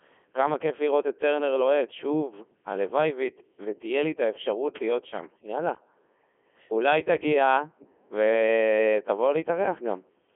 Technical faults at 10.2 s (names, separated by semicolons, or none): Codec 2 vocoder